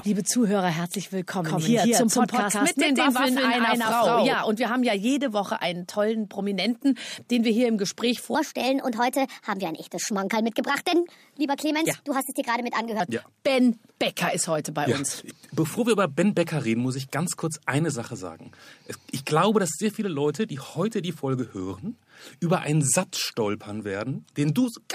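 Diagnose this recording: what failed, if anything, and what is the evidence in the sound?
From 1.44 to 4.34 s there's a doubled audio track: a second, full-band copy trails the original by about 150 ms at roughly the same level, with no decay or room colour, and it cuts in and out abruptly. That's likely an editing slip leaving two copies out of step.

Between 8.35 and 13.0 s a section runs at the wrong speed, 1.22 times too fast, so everything turns hurried and sits about three semitones high, with speed and pitch moving together. Most likely that stretch was played or rendered against the wrong clock.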